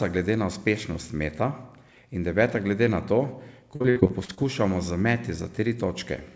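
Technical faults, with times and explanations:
3.76–4.39 s, repeated packet loss (robotic sound): right after "deveta glede na to" and before "z meti", the speech turns choppy and robotic. Audio keeps dropping out in quick succession, roughly seven times, and each hole, the longest about 59 ms, is patched by stretching the last sound, so about a third of the stretch is filler. Through the whole clip nothing sounds above 8 kHz, which fits a wideband call codec such as G.722.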